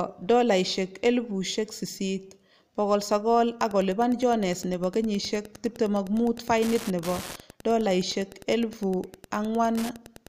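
From 3.55 s to the end, a steady ticking sits under the speech: Wi-Fi interference. A nearby radio's beacon, sent every 102.4 ms, is picked up and rectified by the audio circuit, leaving a click about ten times a second, roughly 20 dB below the speech. Mains buzz is a continuous tone, and random dropout clicks are irregular. This ticking is pulsed and evenly spaced, keeping its rhythm through pauses.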